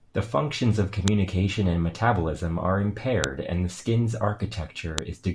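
Sharp clicks at 1.08 s (after "functions of"), 3.24 s (after "and metabolism are") and 4.98 s are file headers played as audio where pieces were joined, each showing as a vertical spike.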